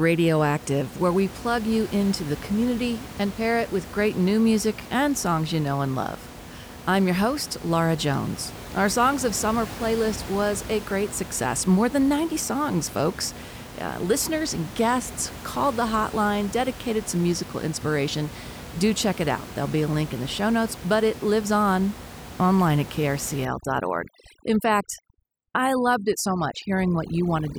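Overdone noise removal starts at 23.45 s, after "lives on online at", and lasts to the end. Bands near the noise estimate are cut to nothing, taking quieter voice detail too, so the room noise becomes twinkling near-silence.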